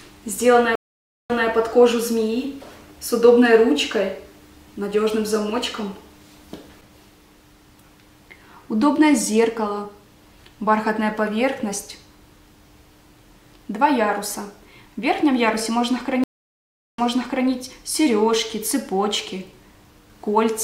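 At 0.75 s the audio drops out. This is a stream reconnect. The connection broke, the player fell silent, then reconnected and started a new decoder mid-stream. The gap lasts about 0.54 s. Playback picks up 180 ms earlier than where it stopped, so a short stretch repeats. The restart fades in softly, and the event clears by 1.48 s. At 16.24 s a second stream reconnect follows. The silence runs 0.75 s. The audio resumes 0.5 s back, repeating more, and settles by 17.48 s.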